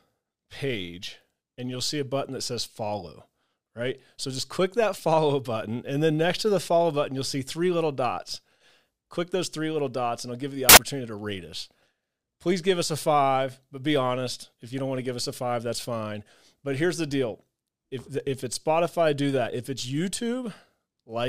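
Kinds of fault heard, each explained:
Samples built from the wrong bytes: the reader misassembled each sample's bytes, so the fast-changing low bits became the high-order part of every value. The speech turns into a burst of loud, harsh broadband noise for about 80 ms, between "I'll give you the" and "to rate us".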